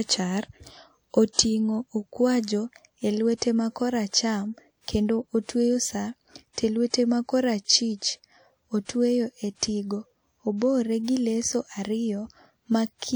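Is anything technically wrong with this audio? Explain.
Yes. The speech carries pre-echo at 3.37, 4.08, 6.53, 6.90, 8.85 and 11.03 s. Each lasts about 40 to 50 ms. A transform codec spreads its quantisation noise across a whole block. When a sharp attack lands late in that block, noise meant for the loud part leaks into the quiet moment before it. So each attack is preceded by a brief hiss. The onset itself sounds softened and smeared.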